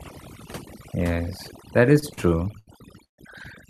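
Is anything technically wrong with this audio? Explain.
Yes. Throughout, the speech sits over near-silent background with twinkling specks: overdone noise removal, where an overly strong reduction suppressed bands near its noise estimate, taking quiet voice detail too.

From 1.99 to 3.21 s the speech drags and stutters through nine stalls totalling 349 ms, the longest 142 ms: repeated stalls (stutter), where late packets emptied the jitter buffer and the last sound was stretched to cover each wait.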